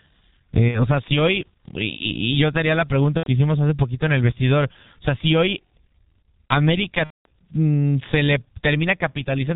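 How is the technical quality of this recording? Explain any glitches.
The recording is poor: heavy codec damage runs through the whole clip, and speech drops out three times.

G.723.1 codec: the speech is squeezed to about 6.3 kbit/s in 30 ms frames with nothing kept above 4 kHz, and the coarse, slowly updated voice model leaves it muffled and hoarse, with consonants smeared together throughout.

VoIP packet loss concealed by the speech codec: packets went missing at 0.68–0.86 s (about 60 ms lost), 3.17–3.29 s (90 ms) and 7.04–7.26 s (210 ms), consistent with whole 30 ms frames dropping. The decoder stretched its last pitch and filter with falling gain, so speech turns buzzy or noisy and fades, staying weak briefly after packets return. The last gap is clearly the longest.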